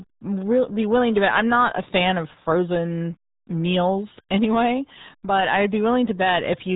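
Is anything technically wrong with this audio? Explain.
Yes. Across the whole clip the speech sounds muffled and gargly, with a bubbling, underwater quality and almost no brightness. Nothing is heard above about 3.8 kHz, so sibilants and consonant detail are gone. This is heavy damage from the RealAudio 14.4 codec, a dial-up-era speech coder. Squeezing audio into a stream that fits 8 kbit/s forces it to discard the upper band and crudely model what remains, which leaves that gargly, smeared texture.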